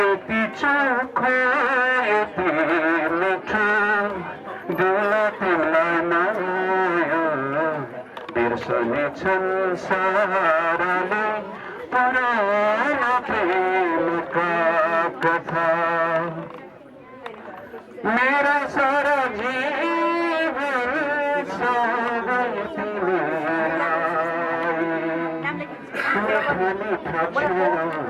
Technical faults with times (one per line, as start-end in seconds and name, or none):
none